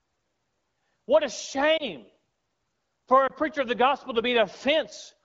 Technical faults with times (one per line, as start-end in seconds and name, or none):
1.77-1.87 lost AMR speech frames
3.27-3.32 lost AMR speech frames